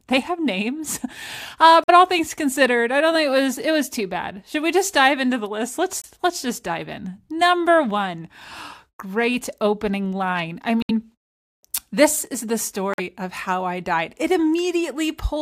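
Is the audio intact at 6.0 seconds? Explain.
No. From 6.00 to 6.05 s there is a corrupt frame muted: damaged compressed data was rejected by the decoder and replaced with silence. The speech drops out abruptly for about 52 ms, a gap that fits two lost frames, and timing is preserved.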